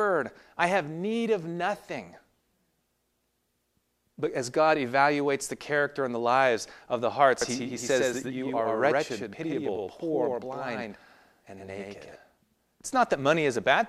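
Right after "lives of the hearts", from 7.42 to 12.16 s, there's a doubled audio track: a second copy, about equally loud, trails roughly a tenth of a second behind, likely from a slower capture path.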